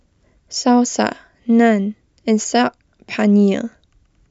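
No technical faults can be heard anywhere in the recording.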